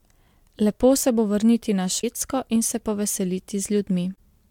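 Damaged data in a compressed stream strikes twice in this speech clip, from 1.97 to 2.04 s and again from 4.12 to 4.18 s. Each time, a stretch of the encoded bytes is corrupt, so the decoder misreads those frames, loses its place in the stream and hunts for the next valid frame header before playback resumes. What reaches the ear is a short chirp, squawk, click or hole of roughly 70 ms that breaks into the speech.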